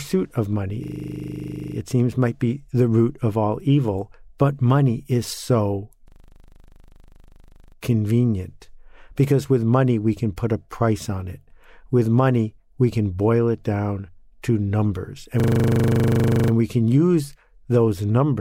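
Speech with a system hang loop three times: 0.84–1.76 s after "of money", 6.08–7.76 s after "but money is so", and 15.4–16.52 s after "it down to numbers". A frozen driver kept replaying one 40 ms buffer, giving a rigid 25 Hz buzz. Unlike an underrun stutter, each repeat is identical and speech resumes with nothing lost.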